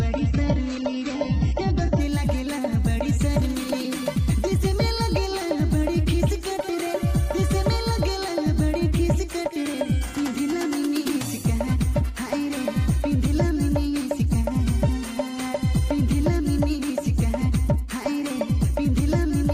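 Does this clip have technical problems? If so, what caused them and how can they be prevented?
Yes. From the start to 2.0 s the audio shows an adaptive stream starting at a low bitrate. The player began on a low-quality rendition to start playback quickly. In that opening stretch there is nothing above 8 kHz, and codec artefacts are strong, which fits a very low-rate HE-AAC stream around 8 kbit/s. At 2.0 s, once the connection had been measured, quality jumps with no gap, consistent with a switch to AAC-LC near 96 kbit/s. Prevent it by configuring the player to start on a higher rendition or prebuffer before playback begins.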